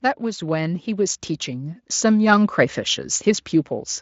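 A speech recording whose level, voice and background together, swells steadily by about 9 dB from 0.2 to 2.6 s, the signature of automatic gain rising as the control lifts a quiet input. At 1.95 s the sound smears briefly into a buzzy tone or coloured noise that fades, for about 40 ms, which fits two lost 20 ms frames, and the Speex codec fills the gap with concealment built from its last pitch and filter.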